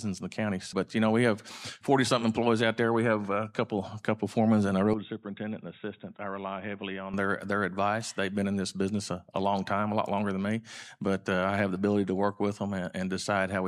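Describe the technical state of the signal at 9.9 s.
At 9.9 s the signal is intact, with no technical fault audible at that moment.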